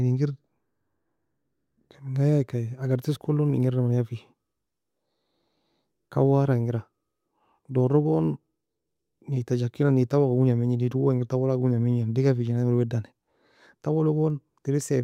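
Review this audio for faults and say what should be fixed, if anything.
Nothing here needs fixing, as the speech signal holds steady throughout with no audible technical faults to correct.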